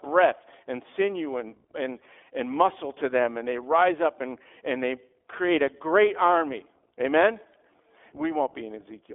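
From start to finish the speech carries the sound of the iLBC codec. Each 20 ms frame is coded on its own, so the voice comes across plainly rough and slightly synthetic. The line band runs from about 300 Hz to 3.5 kHz, and nothing above 3.7 kHz survives. On a spectrogram that shows as a hard ceiling with empty space above it. The quality fits the 15.2 kbps mode.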